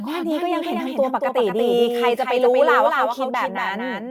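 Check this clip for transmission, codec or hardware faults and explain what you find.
There's one fault, and it runs the whole way through: a doubled audio track. A second full-band copy of the speech trails the original by roughly a fifth of a second, about 5 dB quieter, with no decay or room colour, so it's likely a slower second capture path mixed back in.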